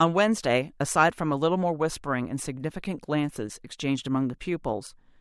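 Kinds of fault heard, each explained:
No technical faults present in the speech; nothing to report.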